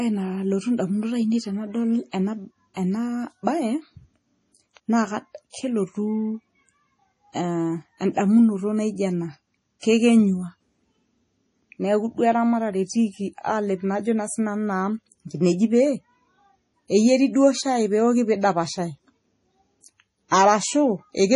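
Speech with heavy codec damage throughout. Nothing is heard above 11.4 kHz, and the sound has a watery, swirly quality with smeared attacks. This is likely MP3 compression, at a low bitrate that fits about 32 kbps, cutting treble and dropping weak detail. Pre-echo appears at 2.74 s, 5.50 s, 9.80 s and 20.28 s. Each attack is preceded by a brief hiss lasting 26, 40, 34 and 34 ms respectively. The codec spreads noise sized for the loud attack across its whole block, so the quiet moment before it is filled too.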